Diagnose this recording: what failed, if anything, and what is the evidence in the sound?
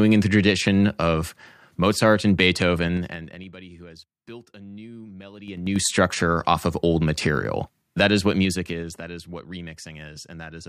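Zipper noise from unsmoothed gain stepping in the buffer stage: ticking at 2.79–3.53 s, 5.39–5.85 s and 8.36–9.01 s, as the level jumps in 2 to 5 dB steps about ten times a second.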